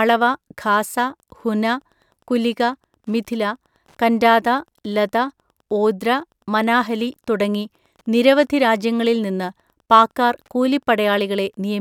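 From 1.2 s on, Wi-Fi interference adds faint ticking every 102.4 ms, a nearby radio's rectified beacon, far slower than the 217 Hz buzz of GSM interference.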